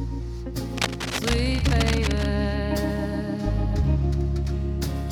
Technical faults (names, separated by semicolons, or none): cable scratch noise